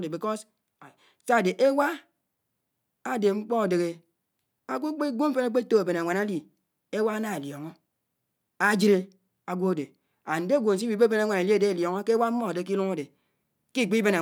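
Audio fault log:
No fault in this audio.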